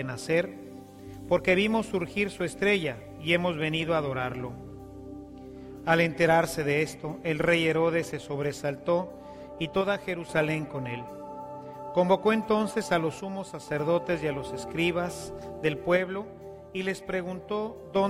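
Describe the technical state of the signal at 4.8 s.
At 4.8 s the signal is intact, with no audible dropout, distortion, glitch or other technical fault at that moment.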